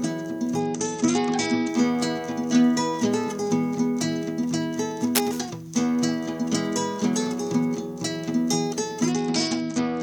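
From 0.6 to 1.68 s the treble suddenly dulls and a gritty, grainy noise rides on the sound: a Bluetooth SBC bit pool drop, where a congested link starves the encoder, consistent with the bit pool falling from 31 to 9 (around 72 kbps). It recurs from 9.12 s to the end. Unlike steady low-bitrate encoding, it arrives abruptly and is tied to link trouble.

At 5.15 to 5.41 s a dense, uneven rustling burst sits only slightly below the sound, most likely cable scratch noise from a worn connector being moved. It is irregular and noisy rather than a clean click.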